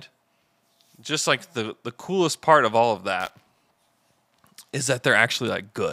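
Speech with buffer tearing from 3.2 to 4.0 s. A robotic 200 Hz buzz means writer and reader cross every 5 ms, so a small sliver of each period holds audio roughly 20 ms old. Spectrograms show stripes every 200 Hz, and waveforms show regular hard joins.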